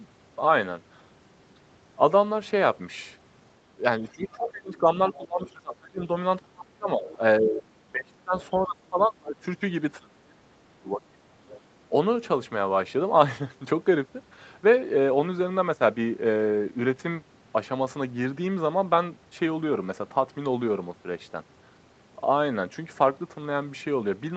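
From 3.79 to 9.43 s the talker's speech is suppressed in double talk. Over about four seconds within that span, the level dips by as much as about 25 dB, thins out and drops away in pieces. The likely cause is the echo canceller failing to separate the near talker from loudspeaker echo while both sides spoke, and attenuating both.

Within the same stretch, the other side's voice leaks through. A faint second voice sits about 25 dB below the speech from 4.08 to 5.5 s. Brief scraps follow at 7.09 to 7.17 s, about 20 dB down, and at 8.41 to 8.47 s, about 25 dB down. This is likely residual loudspeaker echo that the canceller did not fully remove from the microphone signal.

A second suppression episode runs from 9.99 to 11.21 s. It gaps the speech for around a second, again with drops of up to about 25 dB. One more leaked fragment follows at 11.48 to 11.6 s, about 25 dB below the speech. Throughout, the audio tops out near 8 kHz, as expected for this call path.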